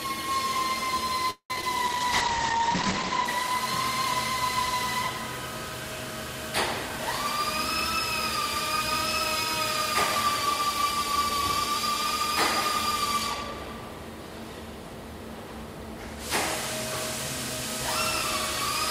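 A recording of everyday sounds turns choppy from 1.30 to 1.63 s through repeated packet loss. Most of that stretch is filled by stretching earlier sound, including one 195 ms gap, so it is not a single clean dropout. From 1.86 to 4.23 s a call bitrate drop dulls everything above about 8 kHz and adds roughness, which fits a fall to roughly 12 kbps. Because the whole band stays coarse without any holes, it differs from loss. Between 10.68 and 13.52 s a jitter buffer speed-up plays the audio 4% fast at unchanged pitch, trimming roughly 150 ms to cut delay. The pitch holding steady separates it from a resampling error.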